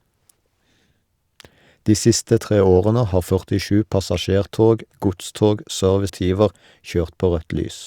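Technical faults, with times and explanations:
6.09 s, stream segment skipped: right after "passasjertog godstog" the speech jumps abruptly forward with a brief click-like blip at the join, and the sentence resumes at a point that doesn't follow on. This is likely a segment of the stream that failed to load, so the player moved to the next one and a stretch of programme was lost. Unlike a packet-loss dropout, nothing is muted or smeared; the sound simply lurches ahead.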